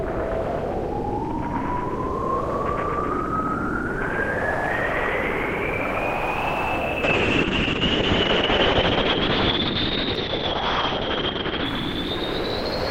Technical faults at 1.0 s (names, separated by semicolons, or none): none